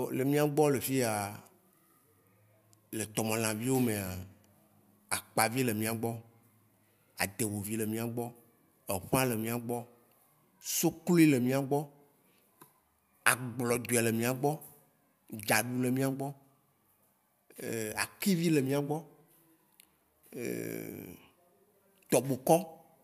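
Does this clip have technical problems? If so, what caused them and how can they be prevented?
No, there are no technical faults.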